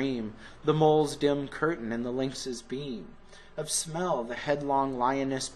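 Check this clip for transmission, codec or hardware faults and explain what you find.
One fault is present. From 2.42 to 4.37 s, channel delay (comb filtering): one channel runs around 5 ms late before the two are summed to mono, cancelling shared content at evenly spaced frequencies from near 100 Hz upward, so the sound turns hollow and phasey.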